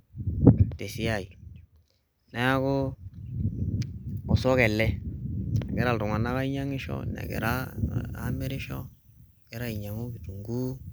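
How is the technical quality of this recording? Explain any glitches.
The recording has one clear fault in its closing section. From 7.24 s to the end, pre-emphasis is left on. The 50 µs FM treble boost was never undone, so 10 kHz sits about 11 dB above 1 kHz. The speech turns thin, bright and sibilant.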